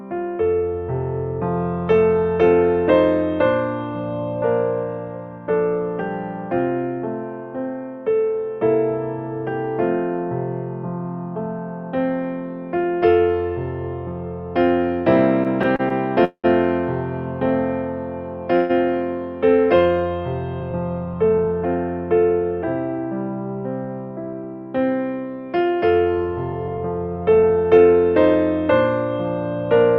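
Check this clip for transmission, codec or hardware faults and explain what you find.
Three transmission faults are audible, all tied to jitter-buffer behaviour on a packet link. No codec or hardware faults stand out.

From 15.43 to 16.46 s there are repeated stalls (stutter). Packets arrived late five times, and each time the receiver extended the last sound to cover the wait. The longest wait was 192 ms, and about a quarter of that second is filled sound. Nothing is lost, but the audio hitches and drags.

From 18.56 to 18.71 s there is a call audio freeze. The sound holds as a sustained continuation for 137 ms with no drop to silence, then resumes where it stopped, now 137 ms later than before. The likely cause is packets held up on the way, which emptied the buffer.

From 20.61 to 21.76 s and again from 26.53 to 27.94 s there is a jitter buffer speed-up. To reduce the delay built up earlier, the receiver cut many short pitch-period segments, roughly 0.15 s in each stretch. 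Playback runs at about 111% speed at unchanged pitch and sounds hurried.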